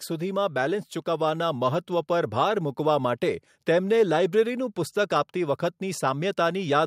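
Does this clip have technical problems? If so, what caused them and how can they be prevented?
Yes. Right at the start there's automatic gain rising. From about 0.06 s to 2.18 s the level swells by roughly 5 dB, and the background noise climbs right along with the speech. That's the AGC deciding the input was too quiet and nudging its gain up over a couple of seconds rather than all at once. To prevent it, turn off the automatic gain control and set a fixed input level before recording.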